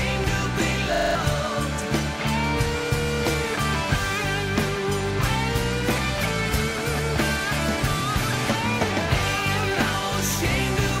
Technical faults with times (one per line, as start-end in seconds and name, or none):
0.94-1.15 system hang loop